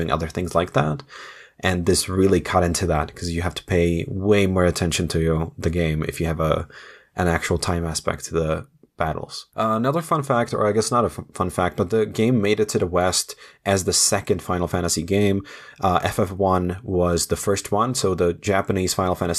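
No technical faults occur at any point in this speech recording.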